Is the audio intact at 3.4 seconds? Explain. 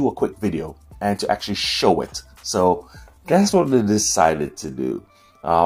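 No. At 3.4 s the sound sits inside a time-stretched section running from 2.60 s to 5.66 s, slowed to about 0.68 times normal pace with pitch unchanged, likely by software repeating short grains. It drags. A spectrogram shows horizontally drawn-out features.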